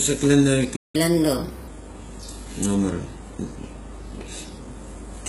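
HE-AAC compression runs through the whole speech clip, likely at a very low bitrate, around 12 kbps. Only the lower spectrum is truly coded. The treble is rebuilt from copied lower bands, so s sounds turn gritty and metallic.

A playback stall follows from 0.76 to 0.96 s, where the sound cuts out mid-flow for about 180 ms. The player likely ran out of data or was blocked, leaving silence until it recovered and resumed where it stopped.

Catch-up at higher speed runs from 0.96 to 1.68 s. To win back the lost time, the player resamples its backlog at 1.25 times normal speed, raising the pitch by roughly four semitones, before dropping back to normal rate and pitch.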